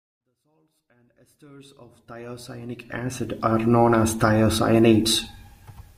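The speech clip has no technical faults: the level rises in a smooth, deliberate fade-in from the opening and reaches full level at about 3.59 s, which is ordinary editing, and nothing else in the signal is amiss.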